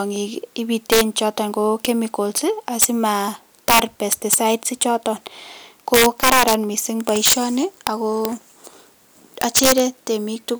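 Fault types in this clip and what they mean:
integer overflow: about 7 dB too much gain pushed speech peaks past the integer limit, flipping a small fraction of samples to the opposite sign as sharp cracks.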